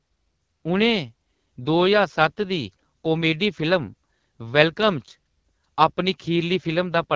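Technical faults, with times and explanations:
throughout: AMR wideband (HD Voice) codec. The speech is plainly rough and raspy. The codec models the voice with a pulse-driven vocal tract filter up to 6.4 kHz. Above that, up to 7 kHz, it adds shaped noise instead of the real detail. At a rate this low, too few bits describe each frame. The harshness fits the 8.85 kbit/s mode, one of the two lowest. The missing deep bass comes from the call's normal microphone filtering.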